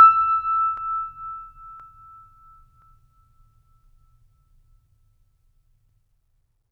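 Periodic USB or driver dropouts run from 0.77 to 5.89 s, roughly every 1.02 s: about a millisecond of music is skipped each time, producing evenly spaced ticks.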